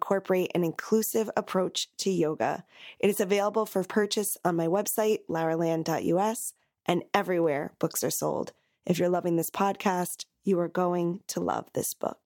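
A handful of samples, likely around four at a time, went missing from this speech stream, making the waveform jump and leaving a single sharp click from dropped samples at 3.17 s, before "available for purchase on", and at 7.44 s, before "books are sold".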